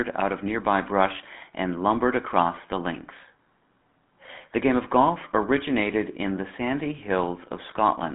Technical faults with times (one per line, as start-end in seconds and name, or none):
0.00-8.14 GSM full-rate codec